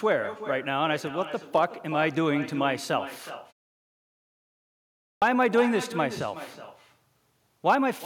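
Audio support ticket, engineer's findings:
Echo with no canceller, whole clip: every phrase is followed by a quieter, thinner copy about 0.4 s later, at about -13 dB. Far-end loudspeaker leaks into its mic, and no echo cancellation removes it before the signal returns over the network. Spectrogram: each syllable's harmonic stack is repeated, fainter and band-limited, shifted right. Waveform: a low-level ghost envelope trails each burst.

Clipped start after a pause, 5.14 s: onset cut abruptly after 1.7 s of silence, with about 79 ms of the opening sound lost. Output device likely dropped to idle during the gap and was still waking or re-locking when audio resumed. Waveform: hard vertical edge from flat silence, no attack ramp. Spectrogram: energy appears as a sharp wall, with the initial sound's onset missing.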